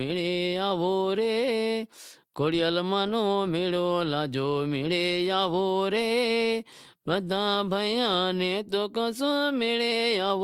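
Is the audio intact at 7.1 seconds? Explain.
Yes, the audio is intact at 7.1 seconds, with no fault at that point in the speech.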